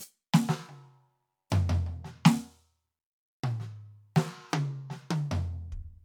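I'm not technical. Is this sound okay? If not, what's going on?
Yes, the music's signal is technically sound, with no dropouts, glitches, distortion or other faults that a listener would notice anywhere in the clip.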